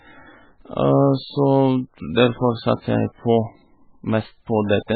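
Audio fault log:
throughout MP3 compression: the speech sounds watery and swirly, with nothing above 4.5 kHz, a hard flat ceiling on a spectrogram, and weak bands flickering on and off between frames as speckled gaps. This is likely heavy MP3 coding at roughly 9 kbps, leaving the encoder short of bits.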